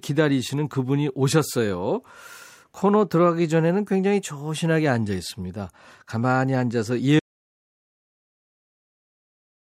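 Speech recording with an audio dropout to silence from 7.20 s that runs to the end, about 2.5 s. The signal stops abruptly mid-flow and the gap is silent with no room tone, most likely from a lost input or mute while recording continued.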